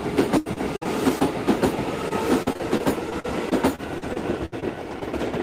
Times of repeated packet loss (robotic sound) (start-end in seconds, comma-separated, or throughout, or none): 0.37-1.22, 2.08-4.64